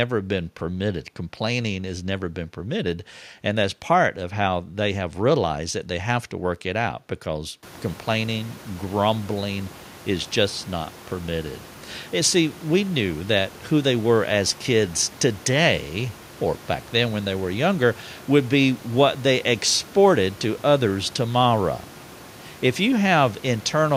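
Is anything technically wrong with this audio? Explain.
No, nothing in this speech clip points to a fault in the recording or playback chain. The room noise rises by about 24 dB around 7.5 s but stays about 23 dB below the speech, and that background belongs to the room rather than the system.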